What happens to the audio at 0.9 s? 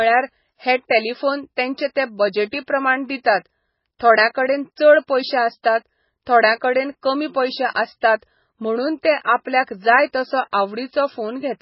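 At 0.9 s, as throughout the clip, the speech carries heavy MP3 compression damage, likely from a very low bitrate around 16 kbps. Nothing survives above 5.6 kHz, and weak frequency lines drop in and out between frames, giving a watery, swirly texture with smeared consonant attacks.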